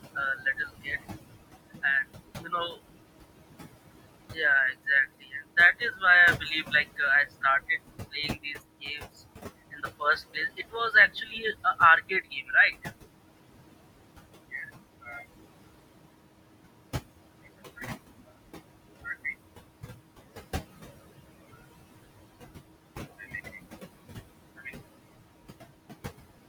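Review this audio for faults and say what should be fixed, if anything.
Noise suppressor artifacts run through the whole recording. The suppressor pulls down the background by about 20 dB wherever it judges a band to be steady noise, updating frame by frame. The room noise, sitting about 12 dB below the speech, therefore drops away in the gaps and comes back underneath the talker. To prevent this, use a lighter suppression depth with slower gain smoothing so the residual noise stays steady.

Speech cut by the noise suppressor occurs in four spans: 0.15 to 2.78 s, 4.32 to 6.99 s, 8.12 to 12.87 s, and 14.52 to 15.22 s. Within these stretches the suppressor mistook low-level speech energy for noise and attenuated it along with the background. Dips reach about 13, 15, 19 and 9 dB respectively, so consonants and word tails sound swallowed. The losses total a fraction of a second in most spans and closer to a second in the 8.12 to 12.87 s stretch. 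To prevent this, raise the speech-presence threshold or protect voice-band energy so quiet speech isn't classified as noise.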